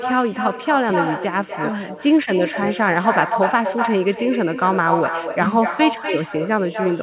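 All the way through, there's echo with no canceller: the far end's speaker feeds your speech back about a third of a second later, only about 6 dB down, and thin. The narrow band, with nothing above 4 kHz, points to a G.711-style call codec.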